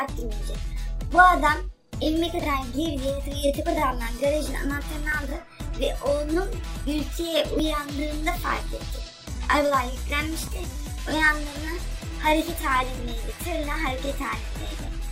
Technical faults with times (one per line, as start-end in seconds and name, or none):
5.12 dropped buffer (overrun)
7.59 dropped buffer (overrun)
10.47 dropped buffer (overrun)